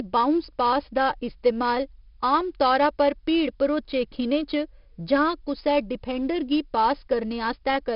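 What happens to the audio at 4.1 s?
At 4.1 s the speech carries the 4-bit ADPCM compression heard throughout: level-tracking gritty hiss, attacks smeared as step size lags, and nothing above 5.3 kHz, unlike constant-level bit-crush noise.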